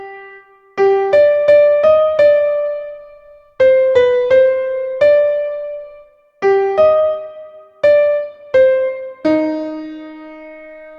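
No technical faults can be heard anywhere in it.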